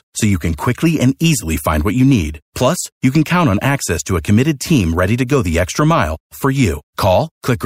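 No technical faults can be heard anywhere in the speech.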